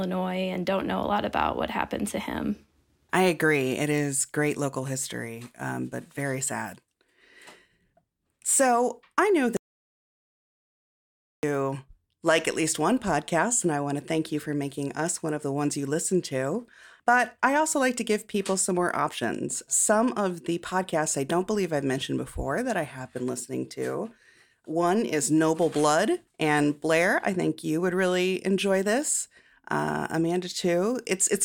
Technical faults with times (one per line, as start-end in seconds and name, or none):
9.57-11.43 audio dropout to silence